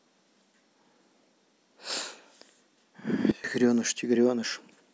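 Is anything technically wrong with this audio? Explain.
Yes. There is a sudden gain jump from 3.31 s to 3.44 s. The likely cause is a digital gain change applied instantly instead of being ramped, so the level shifts between one sample and the next. The speech and its background noise drop together by about 16 dB for roughly 0.13 s, then come back just as abruptly. This leaves a short, hard-edged dip where everything suddenly goes quieter at once.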